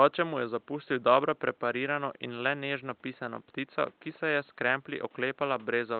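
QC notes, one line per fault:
Nothing stood out on listening to the speech in this clip.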